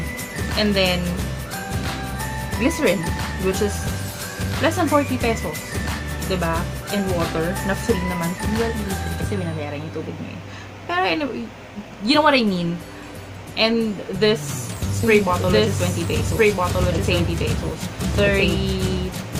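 From 15.03 s to the end, a doubled audio track appears: the sound is joined abruptly by a second, full-band copy of itself, trailing about one and a half seconds behind at roughly the same level, with no decay or room tone. This is likely a second capture path or an out-of-step edit. On a waveform, the envelope suddenly thickens at 15.03 s. A spectrogram shows every pattern repeated after the same fixed offset.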